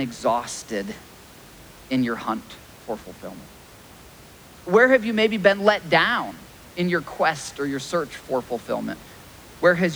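No technical faults in this speech recording; the only thing under it is the room's own background noise, sitting about 24 dB below the speech.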